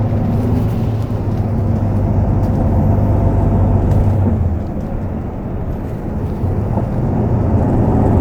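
A drift correction step runs from 0.39 to 1.21 s in this recording of sounds: the audio speeds up by 6.45% and rises 108 cents, about a semitone, then snaps back. This is likely clock-matching software abruptly changing the playback rate to rebalance its buffer.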